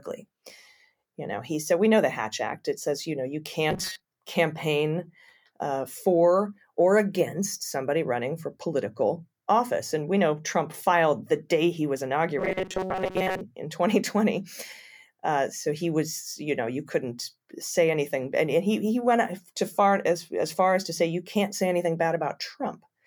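From 3.71 to 4.05 s, after "says you know you" and before "campaign uh for or", the speech turns into a robotic sound from repeated short buffers. It returns from 12.39 to 13.41 s, after "the day he was". Both times a rigid metallic buzz at 188 Hz overlays the voice, which comes through only roughly. The likely cause is late audio being covered by looping a chunk of about 5.3 ms, so most of the real signal is skipped.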